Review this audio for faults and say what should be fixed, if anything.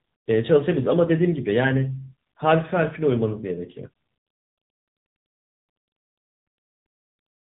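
Tandem speech coding runs through the whole clip. The speech is rough, muffled and warbly, with nothing above 3.8 kHz. The texture points to two low-rate speech coders in series, consistent with an ADPCM stage such as G.726 followed by a narrowband AMR stage near 7.95 kbit/s, with a G.711 link between them. Each decode and re-encode adds its own distortion to the previous one, so the impairment compounds. Prevent it by negotiating a single codec end to end, or by using transcoder-free operation so the speech is coded only once.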